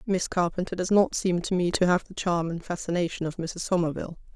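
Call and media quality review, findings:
Sudden gain jump, 1.71 s to 2.05 s. Likely cause: a digital gain stage switching its setting between adjacent samples, with no ramp applied. Effect: speech and background noise step up together by about 6 dB, hold for roughly a third of a second, then drop back at 2.05 s. Both edges are abrupt level steps, not fades.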